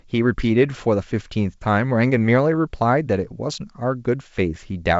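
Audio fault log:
No faults are present in the speech signal, which comes through G.722 wideband telephone coding at 64 kbit/s with its band reaching up to about 7 kHz.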